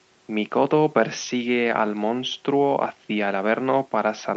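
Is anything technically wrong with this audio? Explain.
No, nothing technically wrong can be heard here.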